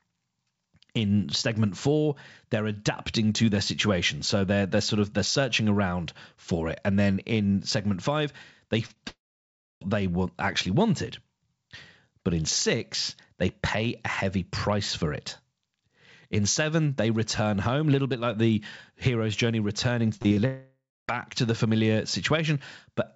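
Short concealed packet loss occurs at 8.86 to 8.91 s and again at 8.93 to 8.98 s, just after "in segment five they". Roughly 40 ms and 20 ms of audio arrived too late to play. The receiver bridged each hole by extending the preceding sound, so it comes across as a quick smear or wobble.

A long network dropout likely follows from 9.08 to 9.83 s. About 0.74 s of audio never arrived. The concealment buzz fades, leaving roughly 0.64 s of silence before the sound resumes at "they want actually wanted", with the lost stretch simply absent.

Repeated packet loss gives a robotic sound from 20.17 to 20.38 s. Four separate gaps, the longest 32 ms, are each patched before the next one hits. Patched audio makes up about 43% of that span, so the passage turns choppy.

Another long network dropout likely runs from 20.46 to 21.10 s. About 0.62 s went missing, and the fading fill gives way to roughly 0.26 s of silence. 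Audio returns at "to the familiar" without the missing part. Throughout the clip the call codec passes nothing above 8 kHz, which is consistent with G.722.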